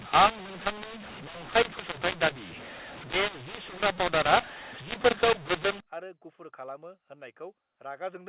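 From 0.0 to 5.80 s, mu-law and A-law are mixed up: A-law telephone samples are decoded as mu-law, scrambling levels, so speech turns harsh and gritty and pauses fill with hiss. The waveform shows distorted peaks and a raised floor; the spectrogram, empty above 4 kHz, shows broadband noise.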